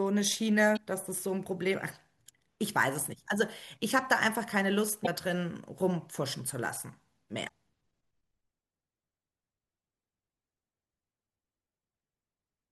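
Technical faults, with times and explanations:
0.73–0.79 s, 5.03–5.08 s and 7.45–7.50 s, damaged data in a compressed stream: corrupted bytes in the encoded speech make the decoder misread frames and lose sync until it finds the next frame header, leaving three short glitches of about 50 ms each.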